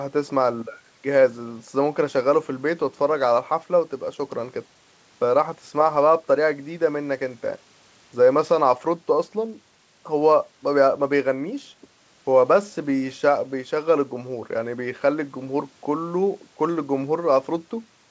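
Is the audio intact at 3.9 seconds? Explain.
Yes, the speech at 3.9 s is intact, with only the normal 8 kHz band limit of the call path and no fault at that moment.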